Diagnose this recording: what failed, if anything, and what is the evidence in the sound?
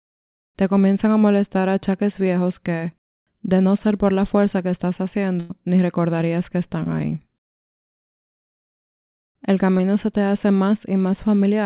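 Network stage, short concealed packet loss at 1.61, 6.84 and 9.78 s: brief smears of 14 to 26 ms where the receiver extended the last sound, too short to fade away.

Network stage, a burst of packet loss from 5.40 to 5.51 s: about 100 ms is missing, bridged by a held, fading continuation. Speech resumes further on through the 4 kHz-limited call audio, unlike a brief smear.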